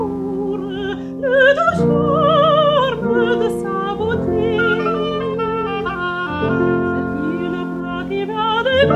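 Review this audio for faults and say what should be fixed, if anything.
Computer activity noise runs through the whole clip: a faint buzzing chirp, pulsing around 150 times a second and sitting roughly 35 dB below the sound. Processor or graphics load disturbs the shared ground. Unlike steady mains hum, it fluctuates with computer activity rather than holding constant. Isolate the audio ground with a USB isolator, an external interface or a balanced connection.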